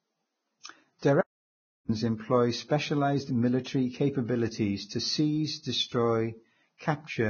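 A speech clip with heavy Vorbis compression damage throughout: the treble stops entirely above about 6.5 kHz, and what remains below that is grainy and hissy, with consonant attacks blurred. That pattern likely comes from Vorbis encoding at a very low bitrate, in the region of 16 kbps. At that rate the coder quantises the residue above its smooth spectral floor so coarsely that fine detail turns into noise of similar energy. Pre-echo appears three times: from 0.99 to 1.02 s (about 35 ms), from 3.64 to 3.66 s (about 20 ms, immediately before "capabilities to seize"), and from 6.78 to 6.80 s (about 29 ms). Each time, a short burst of hiss runs ahead of a sharp onset, and the onset itself sounds softened. The codec spreads quantisation noise across its whole transform block, so when a loud attack lands late in a block, noise sized for that attack also fills the quiet moment before it. An audio dropout to silence runs from 1.21 to 1.89 s, roughly 675 ms. 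The sound cuts off abruptly and returns abruptly, and the gap is dead silent with no room tone, so whatever was spoken in that span is lost. The cause is likely a brief loss of the input signal while the recording or encoding carried on writing silence.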